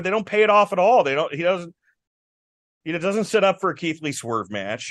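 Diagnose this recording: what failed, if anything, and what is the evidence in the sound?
A rebuffering stall at playback: the speech stops from 2.07 to 2.81 s as downloaded audio runs out, then resumes exactly where it stopped. Unlike a dropout, nothing is skipped; 0.73 s is added.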